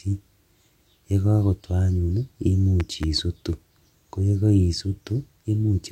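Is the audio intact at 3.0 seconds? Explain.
No. Between 2.8 and 3.06 s, a loud pop occurs. A sudden voltage step or pulse, likely from a plug, switch, static discharge or driver glitch, enters the signal path. It is heard as two sharp pops, roughly 5 dB above the speech, which continues underneath.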